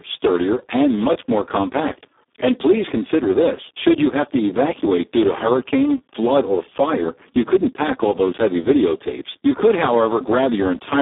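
Throughout, heavy Speex codec damage starves the speech of excitation detail, consistent with roughly 4 kbps, leaving it noisy and hoarse, band-limited to 250 Hz–3.6 kHz, with nothing above 3.8 kHz.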